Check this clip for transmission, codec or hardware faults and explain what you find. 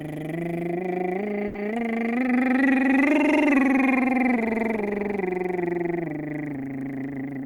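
Two transmission faults stand out in this music: a brief stall near the start and a speed-up at the very end.

From 1.47 to 1.57 s there is a short stall from a late packet. A packet arrived late, the jitter buffer emptied, and the receiver filled about 70 ms by holding the last sound, then resumed exactly where it stopped, so nothing is lost but timing slips by 70 ms. It sounds like a momentary hang with a slight buzz or dip. A spectrogram shows horizontal, frozen partials; the waveform shows a repeating, near-identical cycle.

From 7.00 s to the end there is a jitter buffer speed-up. The buffer had built up extra delay, so the receiver trimmed many short pitch-period slices in a row, removing about 40 ms in total and running at 106% speed with pitch unchanged. The music feels hurried and its tempo drifts forward. On a spectrogram, onsets bunch slightly closer together while harmonic spacing stays the same, and the waveform shows subtle splice points between periods.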